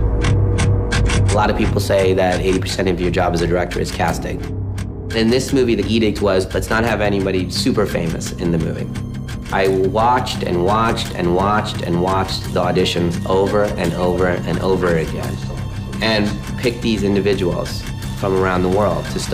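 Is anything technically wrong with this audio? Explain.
No, nothing is technically wrong.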